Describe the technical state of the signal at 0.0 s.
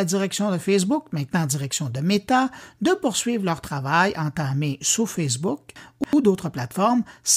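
At 0.0 s the signal is intact, with no audible fault present.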